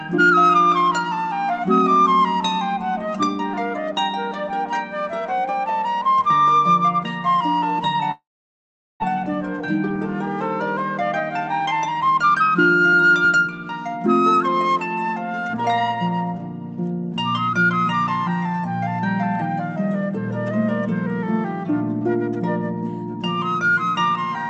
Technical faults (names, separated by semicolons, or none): long network dropout; jitter buffer speed-up